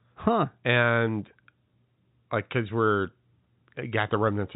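No faults found; the speech carries the expected G.711 telephone coding band limit, with nothing above about 3.8 kHz.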